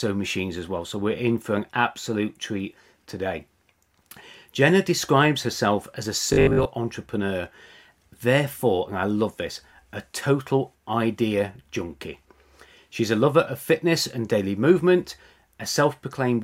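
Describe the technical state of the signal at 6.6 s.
At 6.6 s the speech is caught in robotic sound from repeated short buffers, running from 6.33 to 6.67 s, just after "describes herself as a". New audio is likely arriving too rarely, so a 20 ms stretch is replayed while about half the real signal is skipped. That repetition imposes a rigid 50 Hz metallic buzz that loosely tracks the speech. Unlike a dropout or stutter, nothing goes silent or audibly restarts; the sound keeps flowing, only mechanised.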